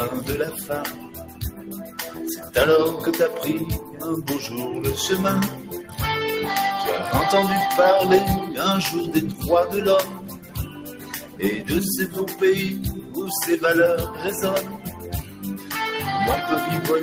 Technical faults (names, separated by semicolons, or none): noise suppressor applied to music or sounds; sound cut by the noise suppressor